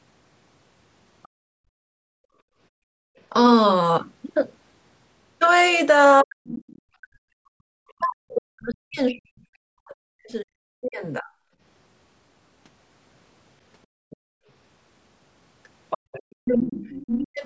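Speech passed through a call's microphone chain, with nothing above 8 kHz, shows three echo-canceller problems. The other side's voice leaking through appears from 1.23 to 1.28 s and from 7.88 to 10.89 s at a very faint level, far below the talker. From 14.1 to 17.06 s it is much stronger, only moderately below the talker. It is likely loudspeaker playback that the canceller failed to subtract from the microphone. Background gated by the echo canceller occurs from 1.28 to 3.16 s, where the room sound drops by up to about 32 dB for roughly two seconds in total, and again between 11.57 and 16.12 s, with brief dips of the same depth adding up to under a second. The canceller is clamping the microphone while the far end plays. Speech suppressed in double talk runs from 6.22 to 11.29 s, where the talker's level falls by as much as forty decibels for around four seconds overall, and from 16.42 to 17.44 s for under a second. 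This is likely the canceller attenuating both voices when the two sides overlap.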